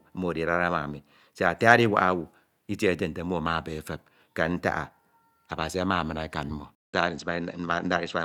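Input switched to a poorer device at 6.75 s in this speech clip: after a 0.19 s silence, the sound runs to the end dull, with nothing above 8.1 kHz and fresh background noise about 40 dB down at unchanged level, likely from a change to another microphone.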